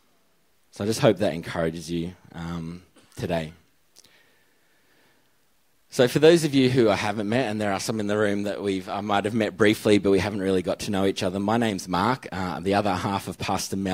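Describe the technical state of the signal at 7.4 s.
At 7.4 s the signal is intact, with no dropout, distortion, glitch or other technical fault audible at that point.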